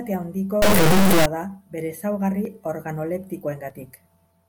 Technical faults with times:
0.62-1.26 integer read as float

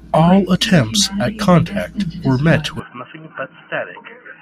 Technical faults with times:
2.80-4.42 input switched to a poorer device

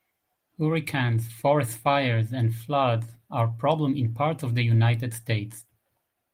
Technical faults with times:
none

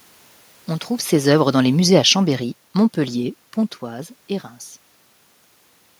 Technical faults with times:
1.12-2.66 automatic gain falling

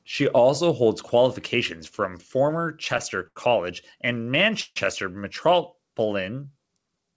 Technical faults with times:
3.27-3.38 short stall from a late packet
4.60-4.78 call audio freeze

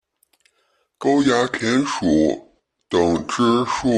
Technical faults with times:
1.03-3.98 section at the wrong speed

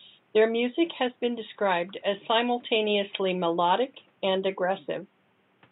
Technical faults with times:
0.96-0.99 corrupt frame decoded

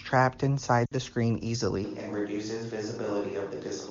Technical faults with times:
0.85-0.94 lost AMR speech frames
1.84-3.91 switch to a distant microphone

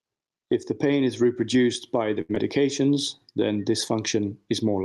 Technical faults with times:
0.00-4.85 gain pumping
2.21-2.31 short stall from a late packet
2.35-2.38 short concealed packet loss
2.82-3.41 jitter buffer slow-down

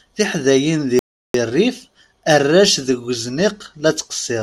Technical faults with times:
0.99-1.34 playback stall

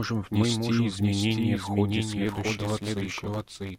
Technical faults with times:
0.00-3.78 doubled audio track
2.25-3.78 block size mismatch (truncated)

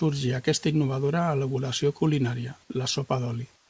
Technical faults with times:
3.56-3.70 comfort noise in place of the background

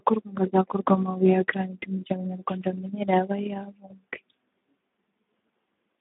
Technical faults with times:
0.00-6.01 Speex codec

